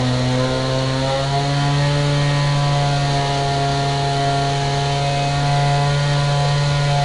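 The whole clip carries 4-bit ADPCM compression, plainly audible as a gritty hiss that rises and falls with the sound's level, because each sample is coded as a coarse 4-bit step from a prediction. Nothing lies above 10.6 kHz, which points to about 89 kbps at a reduced sample rate. On a spectrogram, broadband noise fills in beneath loud passages and stops flat at 10.6 kHz. The waveform looks fuzzy at its peaks.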